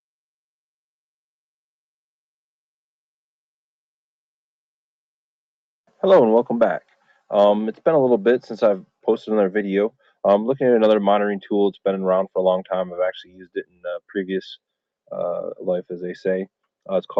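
The noise suppressor misjudged part of this audio as background noise and clamped it down between 13.24 and 14.1 s, a case of sound cut by the noise suppressor. Across roughly half a second in that span the sound sinks, dropping by up to about 21 dB at its deepest, with sustained and decaying parts pulled down hardest and their tails shortened. The call path's Opus coding tops out around 8 kHz, audible as a missing top end.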